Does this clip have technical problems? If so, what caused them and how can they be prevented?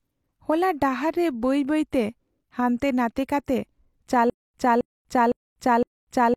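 Yes. From 4.30 s to the end, there is a stutter with silent gaps. A burst about 268 ms long plays, then about 242 ms of silence follows. The cycle repeats four times at an even 510 ms pace. The likely cause is a stalled player or stream. Each retry replayed its last fragment and then ran dry. The audio that belonged there is lost. Larger buffers and a steadier network or storage source would prevent it.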